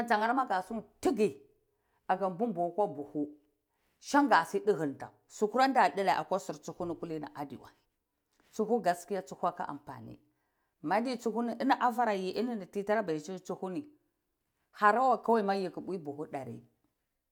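No technical fault can be heard anywhere in the speech recording; the signal holds steady and continuous throughout.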